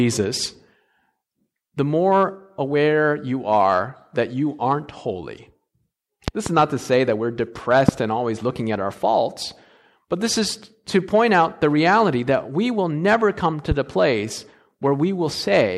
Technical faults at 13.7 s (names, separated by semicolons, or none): loud pop